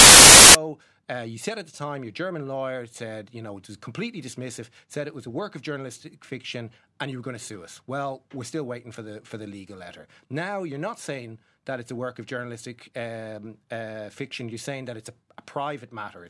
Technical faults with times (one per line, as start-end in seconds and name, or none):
0.00-0.55 file tags played as audio